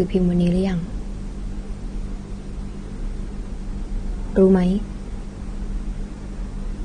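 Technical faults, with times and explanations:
Throughout, AAC compression: The speech sounds dull and smeared, with nothing above 9.7 kHz. Sibilants carry a fizzy, warbling texture, and the codec damage is plainly audible. The likely cause is AAC-LC encoding at a low bitrate, consistent with about 32 kbps. With so few bits per frame, the encoder drops the top band entirely. It also quantises the remaining frequency lines coarsely, leaving gaps that shift from frame to frame and give that unstable, watery quality.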